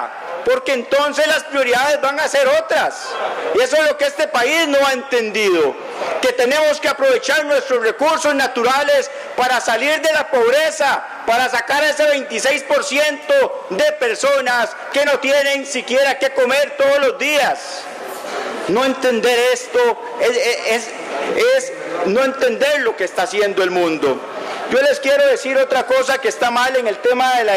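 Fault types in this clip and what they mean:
Gain pumping: The level breathes in and out across the whole clip. Each loud sound is pulled down hard. The swing is large, around 15 dB. Quiet and loud parts end up unnaturally close in level, and the sound feels squashed. The likely cause is input gain set far too high, with a fast limiter or compressor clamping down on every peak.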